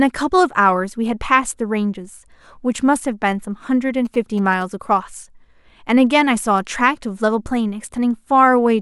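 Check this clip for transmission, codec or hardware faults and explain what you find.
There's one fault here, a short burst of GSM signalling bursts in the speech from 4.05 to 4.63 s. A 2G phone close by is sending brief groups of radio bursts while signalling the network, and some part of the audio circuit rectifies that RF into the signal. You hear it as a galloping dit-dit-dit of short buzzes at about 217 Hz, sitting roughly 20 dB under the speech, for a bit over half a second.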